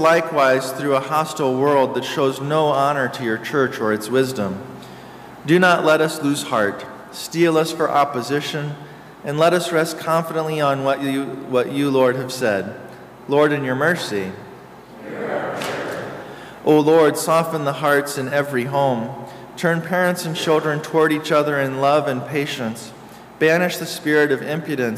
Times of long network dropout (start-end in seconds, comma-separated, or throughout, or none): none